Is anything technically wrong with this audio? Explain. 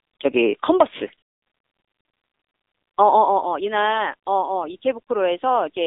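Yes, the whole clip has gone through the AMR narrowband mobile codec, the old 2G/3G phone-call codec. There's nothing above about 3.7 kHz and little below 300 Hz, so you get that boxed-in telephone band. AMR-NB rebuilds the voice from a vocal-tract model fed with a handful of pulses per subframe, and at this quality it's plainly audible: a buzzy, synthetic edge that fits one of its middle modes, around 7.95 kbps.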